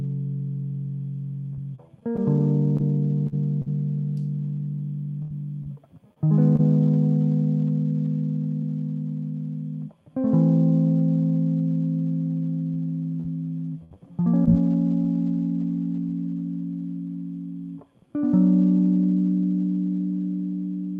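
Between 1.53 and 6.61 s, about ten packets went missing or arrived late across the music, 340 ms of audio in all, the longest hole around 70 ms. The receiver bridged each one by extending the preceding sound, so these scattered short gaps come through as brief ticks, smears and small hiccups. A lighter run of about three such gaps, 120 ms lost, follows between 12.72 and 16.20 s. Throughout, the top end stops near 12 kHz, which fits a band-limited call codec.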